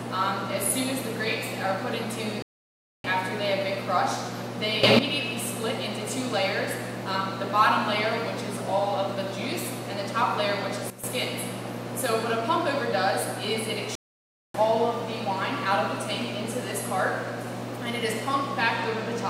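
The audio has two playback stalls, from 2.42 to 3.04 s and from 13.95 to 14.54 s. Each time the sound cuts out abruptly for about 0.6 s, likely because the player ran out of data or its thread was blocked. On a waveform these show as flat zero-level gaps, and on a spectrogram as blank vertical bands. Two sudden gain jumps also occur. At 4.83 to 4.99 s the level rises by about 12 dB, and at 10.90 to 11.04 s it drops by about 12 dB. Each is likely a digital gain step applied without a ramp, so the sound and the noise floor shift together. The waveform envelope steps abruptly, and the spectrogram brightens or darkens uniformly across all frequencies.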